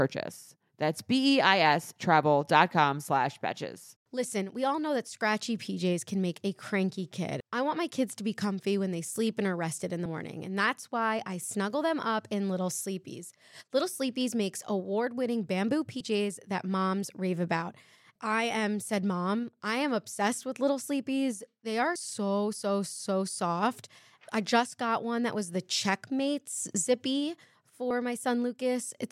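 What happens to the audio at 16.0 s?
At 16.00 s, right before "that moms rave about", there's a skip, likely audio missing between chunks: around 50 ms dropped at a 6-second chunk boundary, with the two sides butted together.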